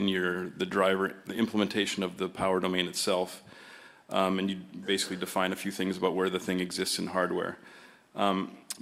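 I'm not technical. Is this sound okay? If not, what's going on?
Yes, nothing in the signal points to a technical problem, so there's nothing here that needs fixing.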